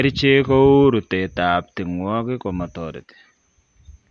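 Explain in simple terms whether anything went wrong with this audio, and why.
Nothing went wrong here.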